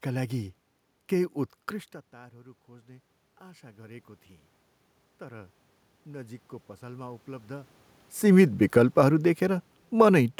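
From 2.13 to 4.15 s and 5.19 to 7.79 s, automatic gain rising follows an input drop of about 22 dB. Voice and room noise swell together by about 6 dB, then about 5 dB.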